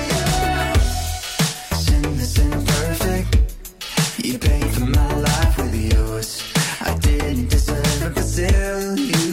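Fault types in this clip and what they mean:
Nothing to flag here: I didn't hear any faults anywhere in the clip.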